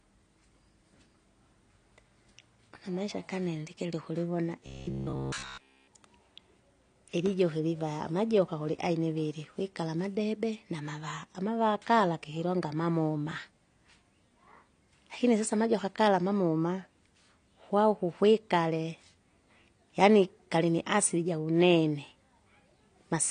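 Throughout the speech nothing is present above 9.7 kHz, and the codec damage is plainly audible, which points to likely AAC compression at a low rate, fitting about 32 kbps. A steady band limit with smeared texture, rather than intermittent dropouts, separates this from transmission faults.

From 4.66 to 5.89 s, just after "kaniandikile ukulivona", the whole stretch turns into robotic sound from repeated short buffers: a fixed 66.8 Hz buzz is imposed, which fits repeated chunks of about 15 ms, likely from audio arriving too seldom. Its rigid, constant rate distinguishes it from codec warble.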